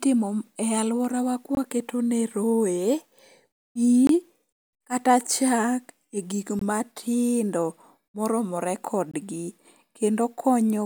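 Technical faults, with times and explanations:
1.55–1.57 s, 4.07–4.09 s, 6.59–6.61 s and 9.11–9.14 s, gap between chunks: the speech drops out for about 21 ms each time, and the holes come every 2.5 s like clockwork. That spacing points to the audio being handled in 2.5 s blocks, with a sliver of silence slipped in at each join. Nothing is cut away, the speech just pauses briefly and then picks up where it stopped.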